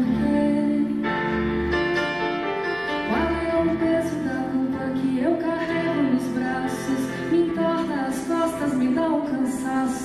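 Wi-Fi interference runs through the whole clip, from start to finish. A Wi-Fi radio sitting close to the audio circuitry is sending its beacon every 102.4 ms, and the circuit rectifies each burst of radio energy into an audible click. The result is a steady, faint ticking just under ten times a second, sitting about 35 dB below the sound itself. It never speeds up or drops out.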